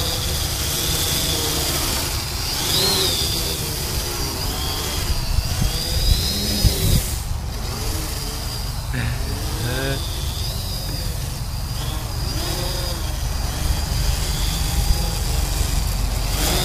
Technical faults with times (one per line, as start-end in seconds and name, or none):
none